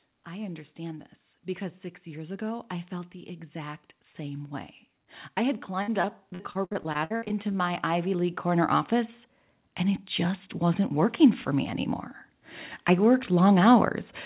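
At 2.04 s, just after "understand this because six", the automatic gain control judged the input too quiet and began raising its gain, a rise of about 4 dB lasting until 4.59 s. The speech and the background lift together as a slow swell. A second, larger automatic gain rise starts at 5.36 s and climbs by about 10 dB until 11.87 s, so the whole sound grows steadily louder over more than six seconds.

Inside that swell, from 5.82 to 7.56 s, the call suffers repeated packet loss with a robotic sound. Over a dozen holes open in quick succession, the longest 58 ms. Each is patched by extending the previous sound, leaving about a quarter of the stretch concealed. The speech turns choppy, with fragments missing between the patches.

Throughout, the narrowband call path leaves nothing above 4 kHz, which fits a G.711-type telephone codec.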